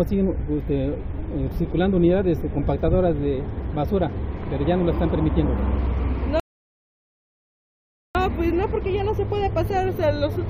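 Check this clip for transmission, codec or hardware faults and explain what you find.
One fault shows up: a rebuffering stall. From 6.40 s to 8.15 s the sound drops to silence for about 1.75 s, then picks up exactly where it broke off. The player exhausted its downloaded audio and paused until more data arrived, so the gap is extra time rather than missing material. That is what separates it from a network dropout or packet loss, where a gap replaces audio and the sound resumes further along, with part of it gone.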